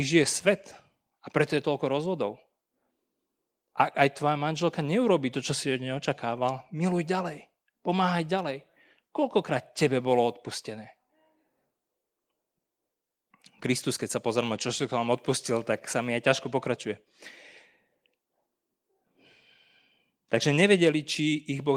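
The speech clip has no technical faults. Opus voice compression is at work, with only light coding damage and full audio bandwidth, which fits a hybrid mode at around 24 kbps.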